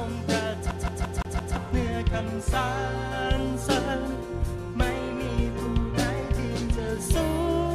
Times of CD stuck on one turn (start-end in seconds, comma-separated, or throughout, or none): 0.71-1.56